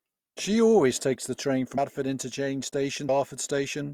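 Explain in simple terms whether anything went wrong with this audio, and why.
Compressed frames were skipped at 1.78 s and again at 3.09 s. At each point the speech suddenly jumps forward, losing roughly a fifth of a second, because chunks of the compressed audio were missing or rejected as damaged and never played. Each jump is consistent with about seven frames of 32 ms each.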